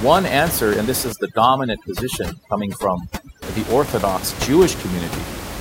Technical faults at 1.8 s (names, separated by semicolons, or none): overdone noise removal